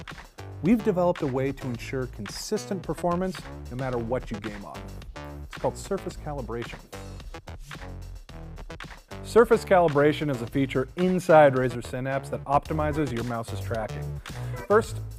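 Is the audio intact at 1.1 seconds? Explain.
Yes, at 1.1 seconds the audio plays through cleanly, with no dropout, click, distortion or other fault.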